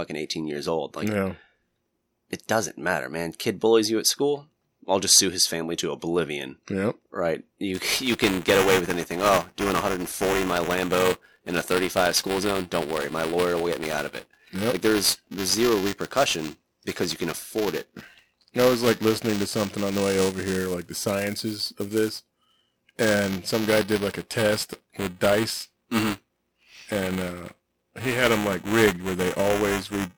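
From 7.74 s onward there is buffer tearing. Writer and reader cross every period, splicing in audio about 10 ms old, which produces a robotic 345 Hz buzz that fits a 128-sample buffer.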